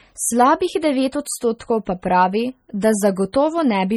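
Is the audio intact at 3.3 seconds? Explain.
No. At 3.33 s a pre-echo appears: a hiss smeared about 14 ms ahead of an attack, visible on the waveform as low noise before the transient's sharp edge. Throughout, heavy MP3 compression is the likely cause of watery, swirly artefacts, fitting a low bitrate near 32 kbps. On a spectrogram it shows as flickering gaps and nothing above 20.5 kHz.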